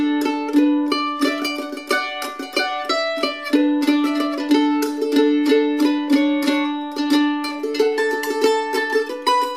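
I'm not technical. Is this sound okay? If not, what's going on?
Yes, the sound is fine: nothing in the recording points to a technical problem with how it was captured or delivered.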